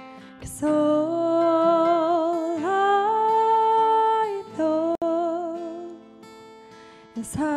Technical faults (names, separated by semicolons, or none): gap at a join of encoded pieces